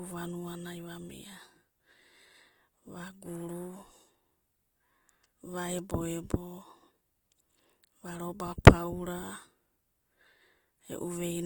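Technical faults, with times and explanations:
Throughout: Opus compression. The speech sounds rough and grainy, with a noisy texture in place of clean tones. Starved bands are filled with noise. Content still reaches about 20.2 kHz. The likely cause is Opus music mode at a low rate, fitting roughly 24 kbps.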